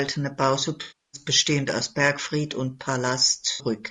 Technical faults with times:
0.00-3.90 low-delay AAC compression
0.81-1.21 AAC frame loss with concealment
3.51-3.65 AAC frame loss with concealment

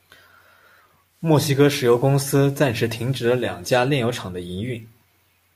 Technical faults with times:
1.06-3.66 digital radio blending to analogue

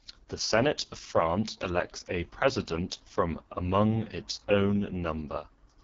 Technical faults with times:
0.00-5.84 AMR wideband (HD Voice) codec

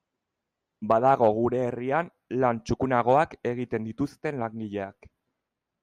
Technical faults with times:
0.91-1.28 hard clipping
3.09-3.18 hard clipping

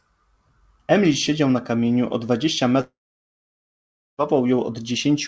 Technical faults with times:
2.81-4.21 long network dropout

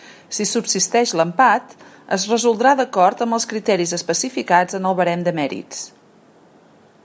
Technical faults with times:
none

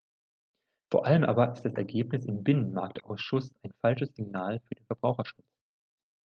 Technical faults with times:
2.95-2.97 lost packet rebuilt from error correction
2.99-3.03 short concealed packet loss
4.29-4.31 lost packet rebuilt from error correction
5.27-5.33 lost packet rebuilt from error correction
5.35-5.39 short concealed packet loss

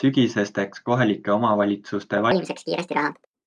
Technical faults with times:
2.31-3.47 wrong sample rate

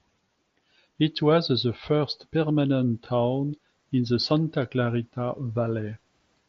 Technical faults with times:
none

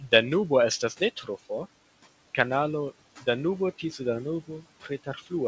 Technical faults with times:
0.00-5.47 noise suppressor artifacts
1.00-1.29 speech cut by the noise suppressor
4.82-5.32 speech cut by the noise suppressor

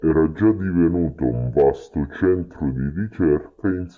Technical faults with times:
0.00-3.97 wrong sample rate

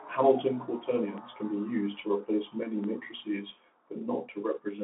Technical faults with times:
0.00-4.83 Bluetooth CVSD headset codec
1.18-2.84 DC step

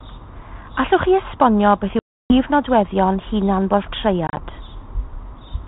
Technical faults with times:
1.99-2.34 packet loss on an ADPCM call
4.27-4.39 packet loss on an ADPCM call

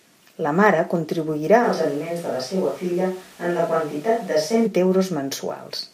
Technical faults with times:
1.64-4.66 switch to a distant microphone

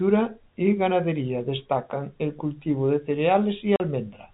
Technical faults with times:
3.76-3.80 packet loss filled with silence

